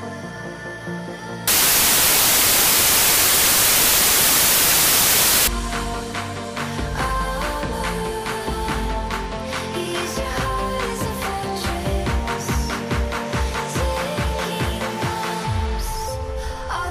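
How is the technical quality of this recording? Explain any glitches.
The recording has one serious fault. From 1.48 s to 5.48 s, about 4 seconds, the samples are built from the wrong bytes. The reader assembles each sample's bytes incorrectly, through a byte offset, swapped byte order or a wrong alignment assumption, so the rapidly changing low-order bits end up as the most significant part of each value. The result is loud, harsh broadband noise.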